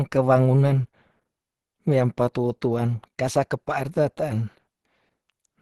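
Throughout, the speech sounds muffled and hoarse with nothing above 12.1 kHz, likely from Opus compression in its hybrid mode, consistent with a bitrate around 16 kbps.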